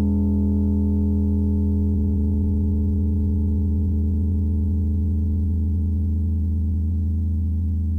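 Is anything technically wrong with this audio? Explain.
Yes. From 1.90 s to the end of the music, a time-stretched section plays at about 0.68 times its original pace while the pitch stays where it was. The change in tempo is abrupt. The stretched part drags. The likely cause is software lengthening the audio to fill a set duration, preserving pitch by repeating short overlapping pieces of the signal.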